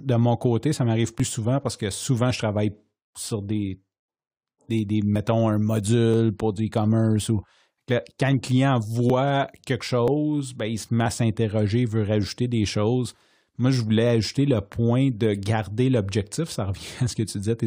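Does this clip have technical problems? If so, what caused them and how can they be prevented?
Yes: there's overlap between stream segments, heard as tiny clicks or skips at 1.2, 5.16, 6.14, 8.12, 9.1, 10.08 and 11.06 s in the speech. Each time about 6 ms of real audio gets trimmed where segment time stamps overlap, at boundaries between one-second segments. Aligning segment time stamps exactly at the packager stops it.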